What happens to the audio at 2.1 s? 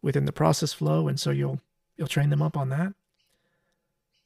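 At 2.1 s the speech is inside a channel delay (comb filtering) fault running from 0.69 s to the end. One channel lags by about 5 ms before mono summing, cutting notches from around 100 Hz upward, a hollow, phasey sound. Unlike flanging, the notches never sweep.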